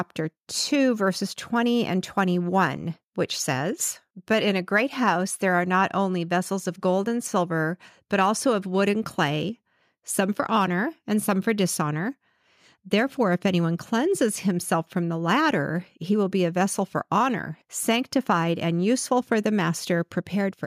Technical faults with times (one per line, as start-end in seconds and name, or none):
none